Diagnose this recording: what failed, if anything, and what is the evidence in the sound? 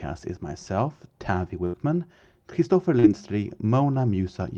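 The failure is in the network. A burst of packet loss hits at 1.65 to 1.75 s. About 80 ms of speech never arrives. The receiver stretches the last sound across the hole, fading it out. Then the speech resumes further on, with that stretch missing.

The network also shows short concealed packet loss at 2.99 to 3.05 s. Roughly 40 ms fails to reach the decoder in time. The receiver fills it by continuing the preceding sound, then blends back in. It is heard as a brief smear in the speech.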